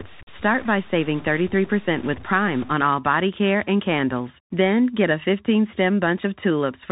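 A speech recording that's been through a Bluetooth CVSD headset codec the whole way, and the damage is plainly audible. Everything above about 4 kHz is gone, so it has that boxy phone-headset band. The one-bit delta coding, consistent with a 64 kbps CVSD link, can't keep up when loud high-frequency energy arrives, so those moments smear and distort. Sibilants come out scratchy, and there's a grainy hiss sitting underneath the whole time. On top of that, from the start to 2.74 s there's distortion riding on the signal, and the pauses in that stretch fill with noise instead of going quiet. That's likely a stuck bit, one data bit jammed at a fixed value somewhere in the converter or data line. Roughly half the samples then land off by that bit's weight, following the waveform, and the bit's effect changes with the sign of small values near zero, which is where the noise in the gaps comes from.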